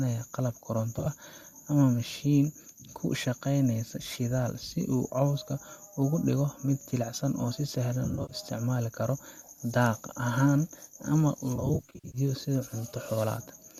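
Speech with AAC frame loss with concealment at 0.94–1.06 s, 8.05–8.35 s and 11.56–12.18 s (the last just after "daaq ahaan ama"). About 60, 160 and 340 ms go missing in short runs, the longest around 70 ms. The decoder patches these from the previous spectrum, giving smeared, phasey gaps, likely over a low-delay AAC stream.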